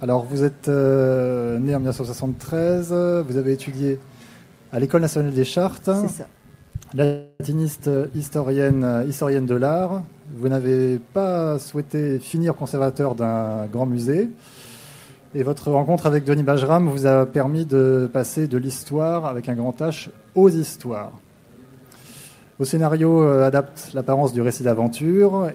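A call audio freeze comes first, most likely because packets were held up in transit and the receiver's jitter buffer ran dry. From 7.04 to 7.41 s the receiver fills about 354 ms by stretching out the last sound as a fading buzz or hiss that never drops to full silence. When delivery resumes, the audio continues exactly where it stopped, so nothing is lost, but the stream now runs about 354 ms later than before. Next comes a jitter buffer speed-up: with more audio queued than its target, the receiver works the delay back down by cutting short pitch-period-length pieces repeatedly. Between 12.05 and 14.37 s this removes about 0.4 s in total, so the audio plays at 116% speed with its pitch unchanged and sounds noticeably hurried over that stretch.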